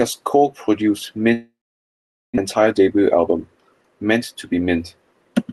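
At 1.33 s the audio stops and the receiver keeps the last sound going as a buzz that fades out. There's then about 0.82 s of near silence before things pick up again at 2.40 s, with the stretch in between gone for good. That's a long network dropout, likely lost packets on the way.

Right after, from 2.47 to 3.49 s, the speech runs about 11% fast at normal pitch and sounds a bit hurried. That's a jitter buffer speed-up: packets arrived in a bunch after the gap, and the receiver trimmed out tiny pitch-period slices, something like 150 ms in total, to bring the delay back down. Through all of it the Opus call path is audible in the top end, which stops around 12 kHz.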